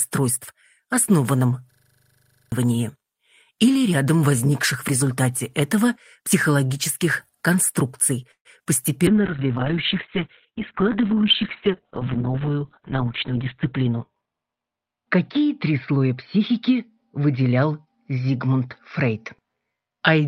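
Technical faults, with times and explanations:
1.72–2.52 s, system hang loop: the playback path stalled while the hardware kept replaying one 40 ms slice of its buffer about 20 times, giving a rigid 25 Hz machine-gun stutter in place of about 0.7 s of real sound that never plays.
8.31–8.47 s, call audio freeze: the sound stretches into a fading continuation, then about 80 ms of silence, before resuming exactly where it left off. This likely came from packets held up in transit and an emptied jitter buffer, adding 137 ms of delay.
8.59–8.62 s and 8.64–8.67 s, short concealed packet loss: two 20 ms pieces each failed to reach the decoder, and the receiver papered over them by extending the preceding sound, heard as two quick smears or wobbles right next to each other.
9.07–20.27 s, call bitrate drop: the encoder fell from 32 kbps to 6 kbps and held the lowest rate for about 4.5 s. The bandwidth narrowed from 20 kHz to 4 kHz, so the sound turns muffled, coarse and watery, with no top end.
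12.62–14.22 s, jitter buffer speed-up: to drain excess buffered audio, the receiver repeatedly cut out pitch-period-sized pieces totalling about 0.15 s. Playback runs at about 108% speed without any pitch change, so this stretch sounds slightly rushed.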